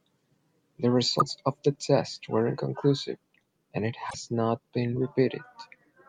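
At 1.17 to 1.22 s and again at 4.07 to 4.15 s, damaged data in a compressed stream makes the decoder misread frames and lose sync, producing brief glitches.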